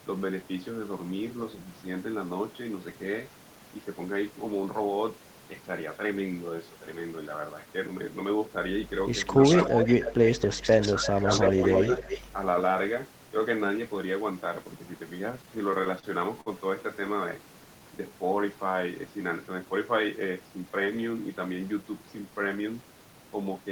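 From 9.43 to 12.27 s an echo leak brings back a delayed copy of the speech about 0.3 s late, at about 15 to 5 dB below the talker, in stretches at 9.43–10.33, 10.63–11.11, 11.29–11.53 and 11.74–12.27 s. This is likely an echo canceller on a loudspeaker end letting its pickup through. The fixed lag sets it apart from room reverberation. Speech suppressed in double talk overlaps this at 10.4–10.67 and 10.95–11.27 s, where the talker dips by roughly 15 dB. Repeated stalls (stutter) run from 15.31 to 16.05 s, with several brief holds of up to 32 ms that stretch the preceding sound. Nothing is lost, so the speech drags and catches instead of skipping. At 16.41–16.48 s a short stall from a late packet holds one sound for about 53 ms, a single isolated drawl rather than a stutter. A jitter buffer slow-down at 17.69–18.17 s plays the speech at 93% speed, adding 45 ms through repeated pitch periods, so it sounds drawn out while the pitch stays steady. 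A jitter buffer speed-up at 20.40–20.87 s runs at 112%, trimming roughly 70 ms, so the speech sounds hurried at unchanged pitch, unlike a tape-style speed change.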